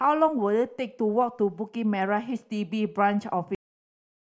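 At 3.55 s the speech stops dead. This is a cut-off end. The final stretch of audio was never written out or played back, so the recording ends partway through a sound. There is no fade and no natural decay. The level falls straight to digital silence, and that silence fills the remaining 0.68 s. The effect is abrupt, as if the playback had been switched off mid-syllable.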